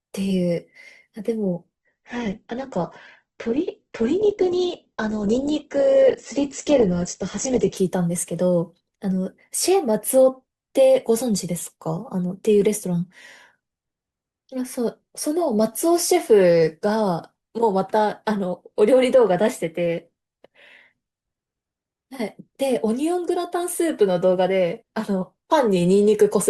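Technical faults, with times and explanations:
1.77–7.77 s, adaptive stream at a lower bitrate: for six seconds the speech abruptly loses its top end, with nothing above 8.1 kHz, and codec artefacts rise. Then full quality snaps back with no gap. The player switched to a leaner rendition while the connection slowed, and the sound fits Opus dropping from about 64 to 12 kbit/s. A spectrogram shows a flat ceiling at 8.1 kHz with sharp vertical edges, while the waveform stays unbroken.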